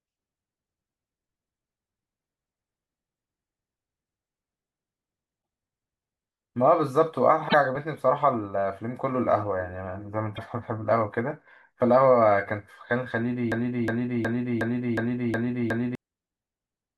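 At 7.48 to 7.54 s and again at 10.36 to 10.39 s, the speech jumps ahead and the first frames after the jump come out garbled, the signature of a broken MP3 bit reservoir. Frames that borrowed data from earlier ones likely found another frame's bytes after a cut, so the first 24 ms frames decode wrongly. The waveform shows an abrupt discontinuity.

From 13.52 to 15.95 s a fragment of about 364 ms plays seven times back to back, a broken-record loop. The stream likely stalled and kept resending the last chunk it held, so the speech that belonged in those seconds is lost. The waveform shows identical blocks repeating at a steady interval, and the spectrogram shows the same pattern copied side by side.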